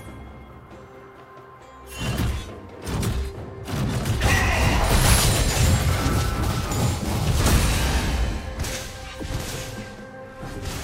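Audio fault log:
No technical faults can be heard anywhere in the audio; the signal remains steady and intact from beginning to end.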